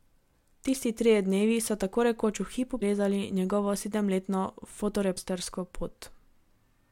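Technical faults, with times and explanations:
2.78–2.82 s and 5.14–5.18 s, damaged data in a compressed stream: two quick glitches, each about 40 ms, cut into the speech. A bit of the coded stream got corrupted there, so the decoder misread those frames, lost sync and had to hunt for the next valid header.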